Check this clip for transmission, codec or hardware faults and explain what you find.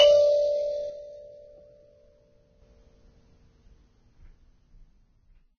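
Two faults are audible in this music clip: heavy lossy-codec damage across the whole clip, and a stretch where one stereo channel goes missing.

Vorbis compression, present from start to finish: nothing is left above 6.6 kHz, and the remaining treble has a hissy, grainy texture, with sustained tones sounding rough and attacks smeared. The likely cause is a low-quality Vorbis encode, which fits a bitrate of around 16 kbps. At that rate the encoder drops the top band, and the high-frequency residue sitting on its spectral floor is quantised so coarsely that real detail turns into noise of similar energy.

One channel drops out from 0.90 s to 2.62 s. Over that span the level falls abruptly by about 6 dB and then returns just as suddenly, and any material carried only in the missing side vanishes. This is likely a lost stereo channel that was then folded down to mono. Content common to both sides is left at half amplitude, which is the 6 dB step, while sound that existed in only one channel is gone entirely until the channel comes back.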